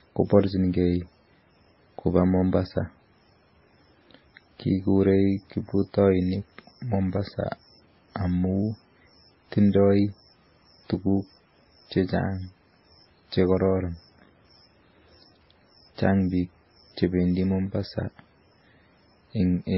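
Throughout the speech, nothing sounds above 5.6 kHz. The artefacts of two different codecs are heard together. Two distinct sets of artefacts suggest likely transcoding between lossy codecs, an MP3 near 16 kbit/s re-encoded as WMA near 32 kbit/s, rather than one low-bitrate pass.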